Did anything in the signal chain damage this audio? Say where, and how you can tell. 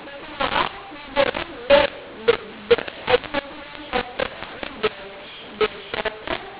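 Yes. The damage is at the codec decode stage, where mu-law and A-law are mixed up. Audio encoded as G.711 A-law at 8,000 samples a second is being expanded with the mu-law table. The fault runs through the entire speech clip. The telephone band itself is intact, and nothing is heard above 4 kHz. The speech sounds harsh and grainy, and the pauses fill with noise instead of falling to silence. This happens because the two logarithmic curves assign different levels to each 8-bit code. Some amplitudes are exaggerated, others are shrunk, and near-zero samples are pushed well above silence.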